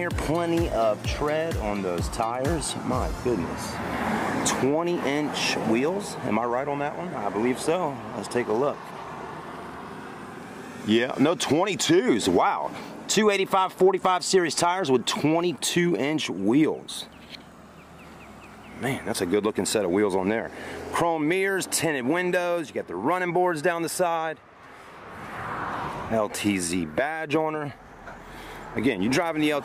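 Two stretches of the audio drop briefly flat and slow, from 6.50 to 7.16 s and again from 10.82 to 12.07 s. Each time, playback runs about 6% slower and the pitch falls by 106 cents, a little over a semitone, before snapping back. This is a drift correction step, likely from clock-matching software abruptly lowering the playback rate to rebalance its buffer. On a spectrogram, the harmonic lines step down together and later jump back up. In the waveform, those segments appear slightly stretched in time.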